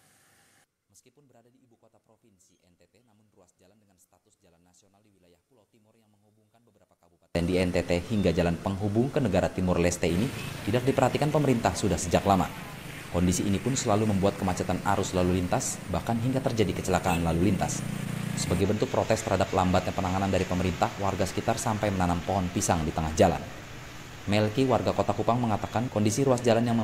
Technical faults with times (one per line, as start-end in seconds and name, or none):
0.00-7.35 one channel inverted